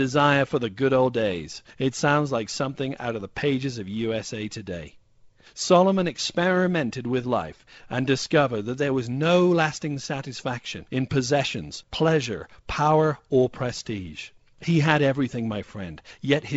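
No technical faults can be heard in this speech.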